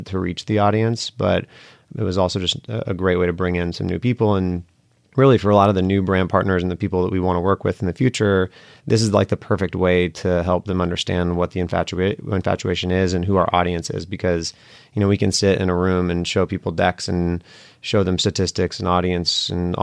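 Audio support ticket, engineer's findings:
Nothing stood out on listening to the speech recording; no findings to log against it.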